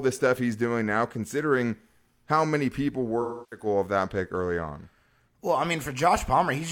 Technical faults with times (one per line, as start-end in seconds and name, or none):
3.21-3.66 AAC frame loss with concealment